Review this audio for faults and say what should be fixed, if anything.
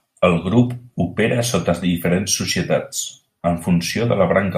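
Nothing to fix: the speech recording shows no faults to report.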